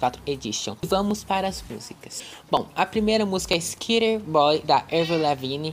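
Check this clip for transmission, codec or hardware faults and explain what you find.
There's one fault here, and it shows up three times: single sharp clicks at 1.11, 2.57 and 3.53 s. They sound like dropped samples. At each point the waveform seems to skip a fraction of a millisecond and jump straight to a later value, so the step makes a brief click. The gap is far too short to lose any of the actual sound, and on a spectrogram each one shows as a thin vertical line.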